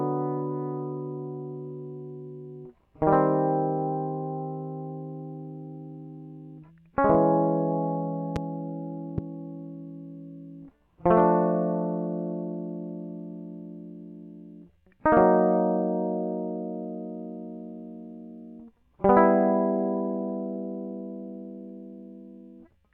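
Two loud pops hit the music at 8.36–8.39 s and 9.18–9.21 s. Each is a single sharp crack, roughly 10 dB above the music, which continues underneath. A stray voltage pulse is the likely cause. Each shows as a narrow waveform spike and a thin, full-height spectrogram stripe.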